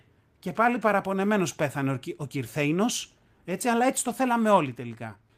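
No technical faults are audible anywhere in this speech recording.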